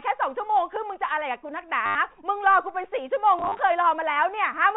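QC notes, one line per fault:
1.86–1.95 s and 3.39–3.59 s, packet loss with last packet repeated: a 90 ms gap, then 120 ms of losses scattered across 200 ms, each filled by replaying the previous packet. The repeats buzz near 100 Hz, which fits 10 ms packets, giving a robotic stutter.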